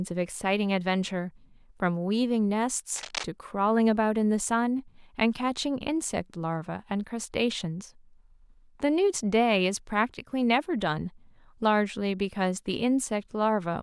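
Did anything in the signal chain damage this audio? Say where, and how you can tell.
Yes. From 2.96 to 3.24 s a dense, uneven scratching burst sits over the speech, roughly 10 dB below it. This is cable scratch noise in the analogue wiring, likely a worn cable or connector being moved so its contact resistance fluctuated rapidly.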